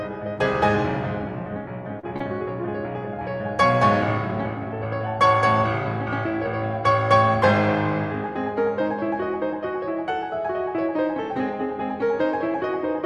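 Short concealed packet loss hits the music twice, at 1.99 to 2.05 s and 2.17 to 2.22 s. Audio arrived too late to decode, so the receiver extended the preceding sound for roughly 30 ms each time before blending back, leaving two brief smeared wobbles.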